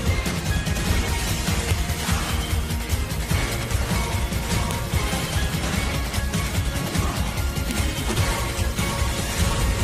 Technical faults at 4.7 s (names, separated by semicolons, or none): file header played as audio